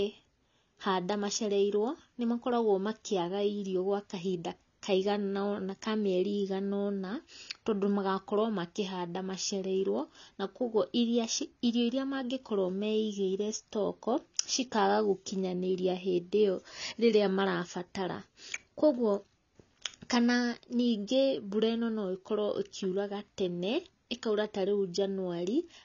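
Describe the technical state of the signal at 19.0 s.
At 19.0 s the speech still carries the AAC compression heard across the whole clip, most likely AAC-LC coding at a low bitrate, which fits roughly 24 kbps. Starved of bits, the encoder quantises its frequency lines coarsely and discards the top band, so nothing survives above 7 kHz. The voice sounds dull and smeared, sibilants turn fizzy, and sustained sounds take on a warble.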